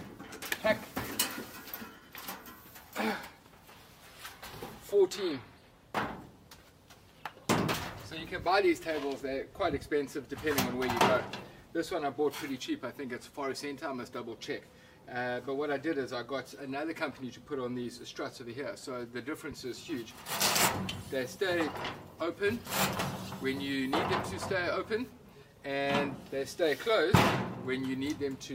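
No technical faults can be heard anywhere in this recording.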